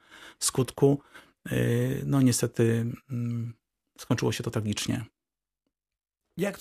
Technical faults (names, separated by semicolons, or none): none